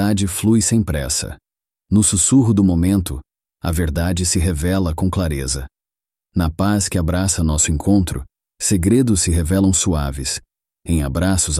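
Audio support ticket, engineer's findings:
No faults found in playback.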